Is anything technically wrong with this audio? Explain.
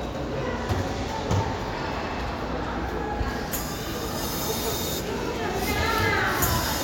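No, nothing technically wrong can be heard; the signal stays intact and steady throughout, with no audible problem in its level, continuity or frequency content.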